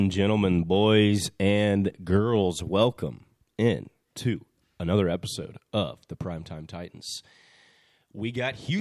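Speech, with nothing technically wrong to point to. No fault can be heard at any point in the recording.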